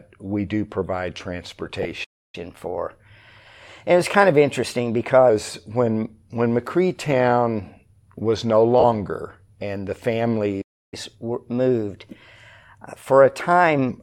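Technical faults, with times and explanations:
1.83–1.85 s and 8.80–8.84 s, lost LE Audio frames: The sound briefly smears into a hiss-like blur, for 20 ms and then 40 ms. This fits two and then four lost 10 ms frames. The LC3 decoder refilled each gap by repeating the last spectrum with scrambled phase, so tones lose their clarity.
2.04–2.35 s and 10.61–10.94 s, playback stall: The audio cuts to silence mid-flow, for about 0.29 s and then 0.31 s. Both times it resumes where it left off. The likely cause is that the player ran dry of data or its thread was blocked.
2.35–5.30 s and 10.94–13.89 s, catch-up at higher speed: Right after each stall, the audio runs 1.1 times fast and sits about one and a half semitones sharp. The player resamples its backlog to recover the lost time, then drops back to normal speed and pitch.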